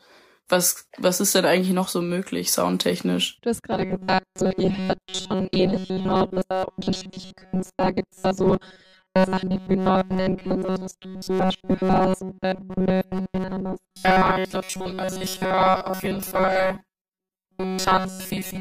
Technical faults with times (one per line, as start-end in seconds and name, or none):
3.72-18.61 robotic sound from repeated short buffers